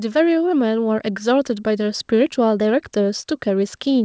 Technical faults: microphone volume stepped up

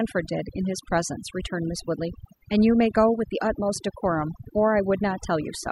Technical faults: overdone noise removal

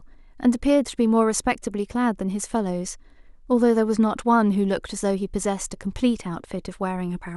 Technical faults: none

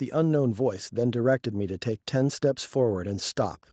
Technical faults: automatic gain rising

